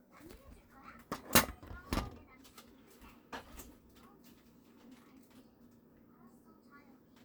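Nothing here needs flagging, since no technical faults turn up anywhere in this recording of sounds.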